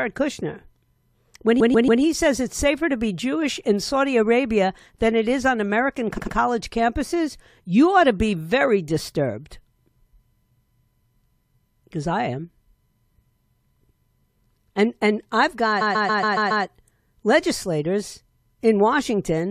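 Repeated frames: short runs of compressed frames were sent more than once, so the decoder plays the same fragment again. From 1.59 to 2.01 s, a 139 ms block plays three extra times before "says it's safer to". From 6.17 to 6.35 s, a 93 ms block repeats twice more before "campuses you ought to". After "and I've", from 15.80 to 16.64 s, a 139 ms block loops six extra times. Each is heard as a stutter, lengthening the audio by 0.42 s, 0.19 s and 0.84 s.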